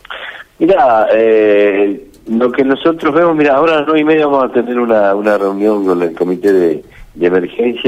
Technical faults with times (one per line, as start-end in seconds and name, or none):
5.24-6.74 crude rate conversion